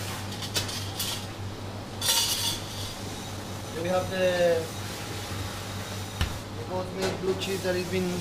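From 3.03 to 4.48 s, a jitter buffer speed-up trims repeated pitch periods to drain excess delay. The audio hurries 15% at steady pitch, and spectrogram events crowd closer together.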